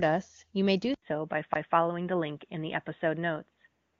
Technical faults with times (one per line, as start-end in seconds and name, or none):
0.94-4.00 input switched to a poorer device
1.54 CD skip